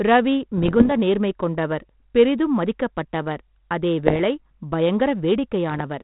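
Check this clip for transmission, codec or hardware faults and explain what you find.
There's one fault here: bit errors on an ADPCM link, at 0.57–0.93 s just before "நேர்மை கொண்டவர் பெரிதும் மதிக்கப்பட்டவர்", then 4.07–4.19 s and 5.69–5.81 s. Flipped bits at an error rate under one percent knock the decoder's step size and predictor off track, so each hit rings on as pops, rough bursts and brief level jumps. The speech runs through G.726 coding, which sounds consistent with 32 kbit/s and is only lightly coloured by it.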